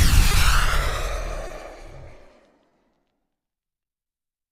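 The audio has clock drift between sender and receiver: the sending clock runs roughly one and a half percent slow, so the receiver's jitter buffer keeps draining and small timing hiccups pop up unevenly through the clip as it patches the shortfall. On top of that there are three short stalls from a late packet, at 0.31 s, 1.47 s and 2.69 s. Each lasts about 40 ms, with the sound held for 20 ms until the packet shows up, then carrying on with nothing lost but a 20 ms later delay.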